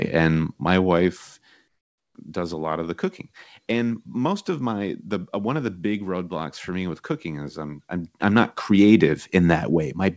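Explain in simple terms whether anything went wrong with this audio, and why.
Between 1.68 and 2.15 s, the call likely stopped sending the real background during a pause and the receiving end filled the gap with comfort noise. For about half a second, the room sound becomes a flat, featureless hiss that is noticeably quieter.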